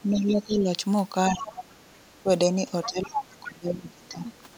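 Speech clip, and the far end's voice keeps leaking through in five spots: 0.00 to 0.52 s, 1.41 to 1.50 s, 2.16 to 2.20 s, 2.83 to 3.47 s, and 4.06 s to the end. That's most likely loudspeaker playback the echo canceller didn't fully remove, strongest around 2.83 s, where it's only about 10 dB under the talker. There's also speech suppressed in double talk from 0.04 to 0.69 s and again from 1.31 to 4.32 s. The talker's level sags, mildly at first and then by around 25 dB at worst, likely because the canceller couldn't separate the near voice from the echo and ducked both.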